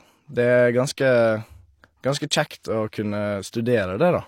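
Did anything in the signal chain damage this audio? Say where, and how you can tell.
Yes, at the codec stage. A brief pre-echo, a hiss of about 20 ms from 3.51 to 3.53 s, runs just ahead of a sharp speech attack, softening its onset. The block's quantisation noise, scaled for the loud attack, spills backwards into the silence. Unlike room echo, it precedes the sound rather than trailing it.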